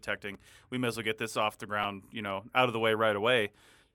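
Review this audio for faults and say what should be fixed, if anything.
Audio arrived late twice, so the device replayed its last buffer: once at 0.35 s, before "we may as well", and twice at 1.84 s, between "get this off the" and "you know out of". Each repeated buffer is heard as a brief click-like stutter, which fits a 5 ms buffer. Give the playback path a larger buffer or more scheduling headroom so new audio always arrives before the device needs it.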